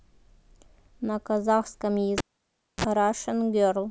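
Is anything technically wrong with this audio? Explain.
Yes. From 2.18 s to 2.84 s the speech is broken by a cable pulled and plugged in while the signal was live. Disconnecting the jack produces a pop, then the audio falls to near silence for about 0.62 s. As the plug is pushed back in, the tip touches before the sleeve grounds, so a 37 ms burst of 60 Hz mains buzz gets through. A second pop follows when the connection seats and the speech returns.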